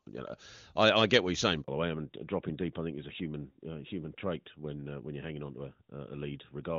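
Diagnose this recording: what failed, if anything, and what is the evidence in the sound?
A handover gap at the network stage. Right after "get what you're saying", the speech cuts out from 1.62 to 1.68 s, a 60 ms hole. The call switched networks, and no speech frames arrived during the switch. The audio in that gap is lost.

A fallback to narrowband at the codec stage. Before 1.68 s the speech is wideband HD Voice, consistent with AMR-WB at 23.85 kbit/s. From 1.68 s to the end, nothing remains above 4 kHz. The speech turns duller and rougher, which fits a switch to AMR-NB at about 12.2 kbit/s.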